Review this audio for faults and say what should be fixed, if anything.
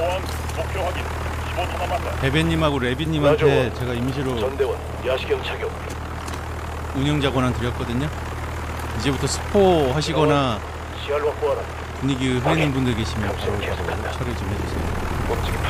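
Nothing to fix: no audible faults anywhere in the audio.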